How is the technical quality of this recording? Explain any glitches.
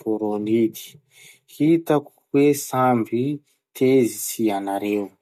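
Nothing to flag: the recording shows no audible technical faults at any point.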